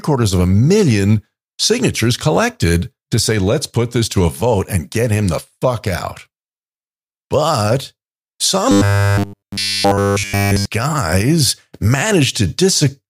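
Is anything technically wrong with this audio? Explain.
Yes. From about 8.71 to 10.65 s there's robotic sound from repeated short buffers. The voice turns into a stiff metallic buzz at 100 Hz. That's likely fresh audio arriving too slowly, so a 10 ms slice gets looped over essentially that whole stretch while the real signal is skipped.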